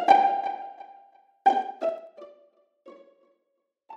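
From 1.58 to 2.32 s the level falls by roughly 25 dB in coarse 3 dB steps, about ten per second, producing zipper noise: each unsmoothed jump clicks audibly. The waveform shows a staircase envelope, and the spectrogram shows faint vertical broadband lines at each step.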